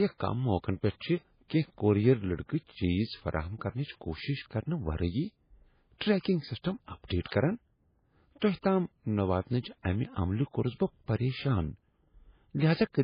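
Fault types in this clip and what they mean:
MP3 compression: Throughout, the speech sounds watery and swirly, with nothing above 5 kHz and chirpy, dulled s sounds. The likely cause is heavy MP3 coding at a bitrate near 16 kbps, with the encoder cutting treble and dropping weak frequency lines frame to frame.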